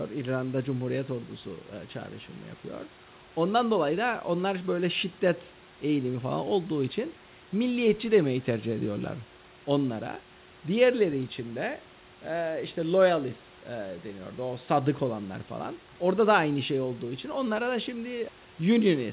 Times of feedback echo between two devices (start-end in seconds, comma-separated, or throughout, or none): none